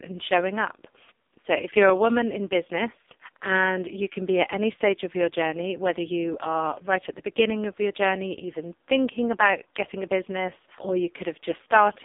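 Speech runs through the AMR narrowband mobile codec from start to finish. The band sits between 250 Hz and 3.6 kHz, with nothing above 3.7 kHz. The voice is heavily buzzy and synthetic, which points to AMR-NB's lowest 4.75 kbps mode.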